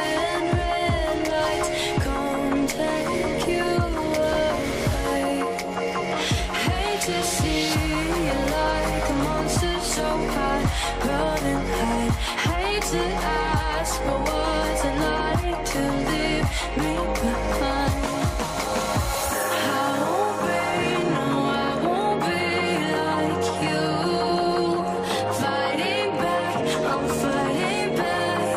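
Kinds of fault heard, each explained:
No technical faults can be heard anywhere in the recording; the signal holds steady throughout with no dropouts, clipping, glitches or other disturbances.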